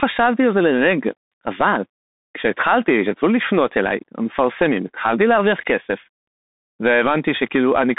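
Throughout, the speech carries Bluetooth CVSD headset codec damage: one-bit slope coding, fitting a 64 kbps link, leaves grainy hiss and scratchy sibilants, and nothing passes above 3.8 kHz, unlike clean telephone band-limiting.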